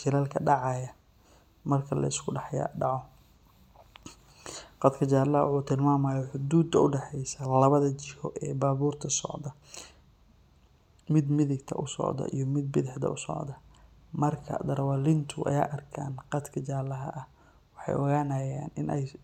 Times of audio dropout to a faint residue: none

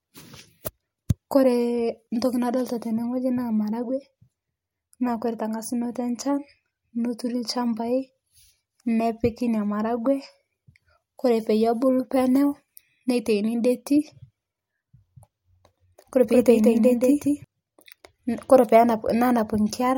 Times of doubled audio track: 16.30-17.44

